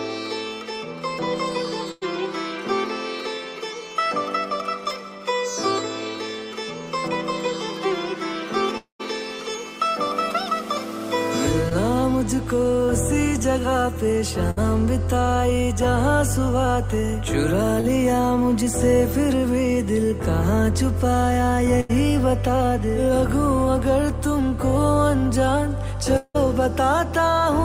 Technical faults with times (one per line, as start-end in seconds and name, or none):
1.91-2.03 burst of packet loss
8.77-9.01 long network dropout
11.69-11.73 short concealed packet loss
14.51-14.59 burst of packet loss
17.80-17.86 short concealed packet loss
21.80-21.91 burst of packet loss
26.17-26.36 long network dropout